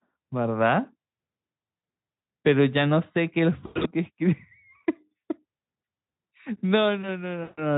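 Speech carried over a VoIP link has packets dropping out three times, a case of VoIP packet loss concealed by the speech codec. At 1.77 to 1.81 s, 3.65 to 3.89 s and 7.43 to 7.62 s the decoder fills gaps of 40 ms, 160 ms and 140 ms by extending its last pitch and filter at falling gain. The sound smears into a buzzy tone or coloured noise that fades, and in the second dropout a 100 ms run sits among losses scattered over 200 ms. The Speex coding itself leaves little audible damage.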